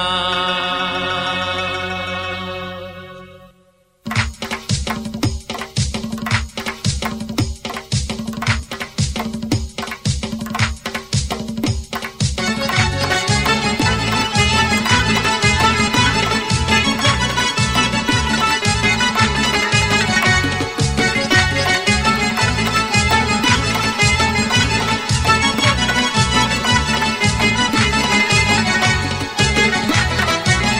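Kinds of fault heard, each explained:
Processor overload crackle: the processor kept missing deadlines on very short buffers, each one skipped, so from 8.42 to 9.06 s the sound tears into gritty crackle.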